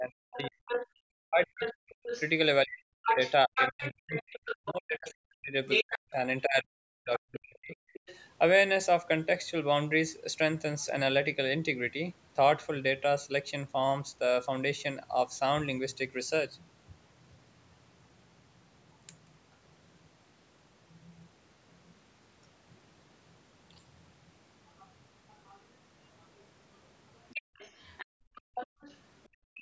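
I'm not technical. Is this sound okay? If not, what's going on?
No. At the start, from 0 to about 8 s, the main voice keeps dipping, going dull or breaking into pieces. This is speech suppressed in double talk, likely because both people spoke at once and the call's echo cancelling turned everything down. Unlike the leak below, the main voice itself gets quieter.

A second, fainter voice also comes through: the other side's voice leaking through, likely from the far end playing on a loudspeaker and reaching the microphone. It appears from 0.32 to 4.7 s, 5.7 to 6.12 s (nearly as loud as the main voice), 7.17 to 8.18 s, a brief scrap at 10.8 to 10.86 s, and from 24.79 s to the end. Here a different voice is added rather than the main one being lost.

Between 27.41 and 29.6 s, the quiet room sound behind the voice drops away for about a second in total and then returns. That is background gated by the echo canceller. 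Only the surroundings vanish while the loudspeaker plays, not the voice.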